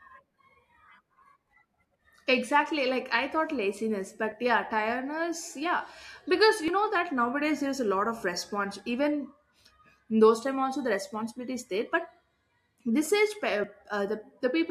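Speech, with two short skips in it. At 6.68 s and again at 13.64 s the sound jumps forward with no gap of silence. Each jump loses roughly 20 ms of audio. The likely cause is a dropped buffer (overrun): the recording software fell behind, the hardware overwrote samples before they were read, and the audio on either side was joined directly.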